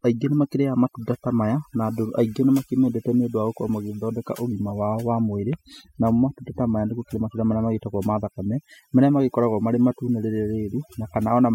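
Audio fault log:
Throughout: overdone noise removal. Aggressive noise reduction suppresses bands near the noise floor, leaving a reduced, twinkling background, with quiet speech detail lost.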